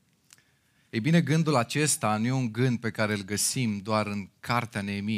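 No technical faults can be heard anywhere in this speech recording. Nothing interrupts or disturbs the audio at any point.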